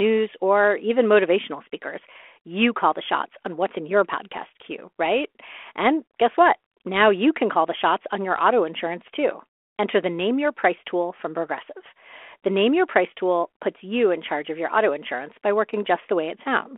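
Nothing goes wrong anywhere in this one; the speech just carries the narrow telephone band of a G.726 line at 32 kbit/s, running as it normally does.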